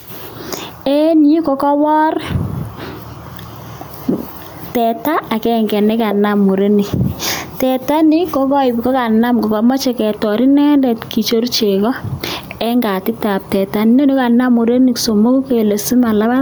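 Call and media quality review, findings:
Gain pumping, throughout: gain swings roughly 10 dB on loud syllables, squashing loud and soft parts closer in level; room noise about 42 dB under the speech; likely excessive mic gain driving a fast limiter.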